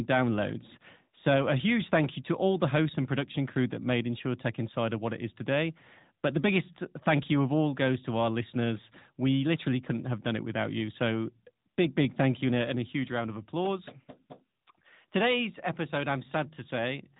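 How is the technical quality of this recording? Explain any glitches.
The recording has one fault, present for its whole length: the speech has been through the AMR narrowband mobile codec. The signal was reduced to telephone sampling and rebuilt from a vocal tract model driven by a pitch predictor and a handful of pulses every 5 ms, which fits a fairly high setting of around 10.2 kbps. Nothing above 3.8 kHz survives, so the voice sounds band-limited and muffled, with plainly audible synthetic coding damage throughout.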